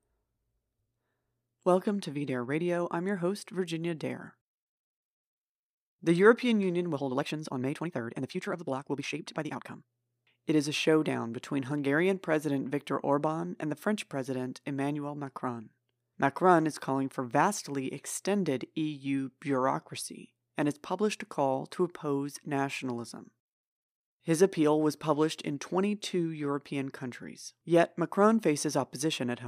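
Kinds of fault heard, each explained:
Time-stretched section: from 6.90 to 10.12 s the speech rushes at 1.61 times speed, yet pitch holds steady, unlike a plain speed-up; likely software length-fitting.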